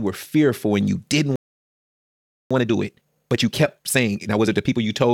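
A playback stall runs from 1.36 to 2.51 s: the speech cuts off mid-flow and the output sits silent for about 1.15 s. The likely cause is the player starving for data or its output thread being blocked, so nothing reached the device until it recovered.

Time-compressed catch-up follows from 2.51 to 4.79 s, as the player works off the backlog built up during the stall. It trims short slices out of the stream and cross-fades the joins, running the speech at 1.5 times normal speed. The pitch stays where it was, but the delivery sounds rushed.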